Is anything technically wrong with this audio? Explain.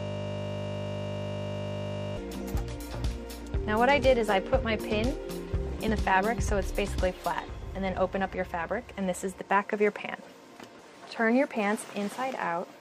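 Yes. From the very start until 2.17 s there is a system hang loop: the system froze while the sound hardware kept replaying a 20 ms buffer, giving a steady 50 Hz buzz. Compressed frames were skipped at 2.41 s and 5.88 s: whole 26 ms frames, about one and then two, were never decoded, so the audio jumps ahead.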